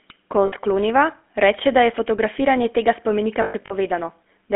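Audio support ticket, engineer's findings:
Whole clip: buzzy, gravelly roughness on the speech, plainly audible; band limited to roughly 250 Hz to 3.4 kHz. GSM full-rate codec, fitting a 13 kbps stream. Pulse-driven vocal-tract model with thinned excitation smears fine voice detail.

0.46–0.53 s: brief metallic ring, sound held instead of moving on. Lost GSM frames, about 60 ms, fits three 20 ms frames. Decoder repeats last good frame's parameters.

3.42–3.73 s: repeated rough, ringing holds, scattered over about 280 ms, longest around a tenth of a second. Same lost GSM frames mechanism, about 180 ms concealed in total, fits nine frames.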